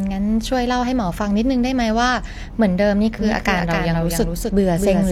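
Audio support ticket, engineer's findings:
Doubled audio track from 3.19 s to end of clip. Second full-band copy of the speech trails by roughly 0.3 s, a few dB under the original. Dry, no room tail, cuts in hard. Likely a second capture via a slower path, or an edit leaving two out-of-step copies stacked. Worth checking the routing and the edit timeline.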